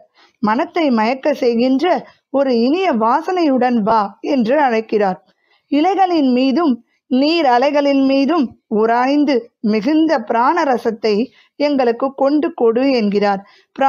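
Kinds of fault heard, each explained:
Sound cut by the noise suppressor: The suppressor mistook wanted sound for noise and turned it down, by about 14 dB near the start and about 16 dB around 5.2 to 5.6 s, each time for roughly a fifth of a second. The level sinks rather than the sound vanishing outright.
Lost LE Audio frames: Around 3.90 to 3.92 s, about 15 ms of signal, which fits two lost frames, is replaced as the LC3 decoder repeats the last spectrum with random signs. The result is a brief noisy smear instead of the silent gap of a plain dropout.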